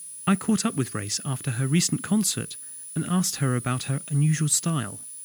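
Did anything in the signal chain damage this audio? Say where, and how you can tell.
Yes: a switching power supply in the analogue stage is bleeding its switching noise into the signal, producing a switching supply whistle. A high tone near 10 kHz, wandering between 9.6 and 10.0 kHz with load, sits about 15 dB below the audio throughout the clip.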